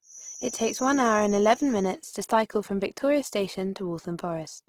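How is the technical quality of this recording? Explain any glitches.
The recording has two audible problems: a coding artefact across the whole clip and a tone during the first two seconds.

Throughout the clip the speech sounds grainy and rough, with a noisy, fizzy quality in the upper range, yet the full bandwidth is kept. This is likely Opus compression in its music (CELT) mode, which fits a low rate of around 16 kbps. Short of bits, the encoder keeps each band's energy but fills its detail with folded or noise content. Unlike MP3, it leaves few holes and so swirls less.

From 0.0 to 2.0 s, ending just before "to cycle from", a thin, steady whistle at 6 kHz sits well below the speech and swells and fades slowly in level. This is likely a feedback whistle from a loudspeaker-to-microphone loop held right at the edge of feedback, where one frequency rings on without growing. Because it neither runs away nor changes pitch, it is distinct from full howl-round.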